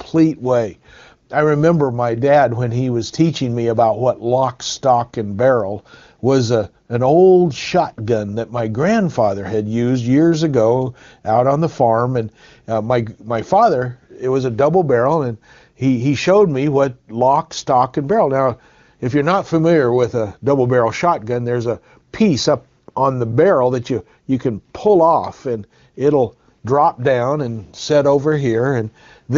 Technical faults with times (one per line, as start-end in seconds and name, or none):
6.87 AMR comfort noise
22.85-22.95 AMR comfort noise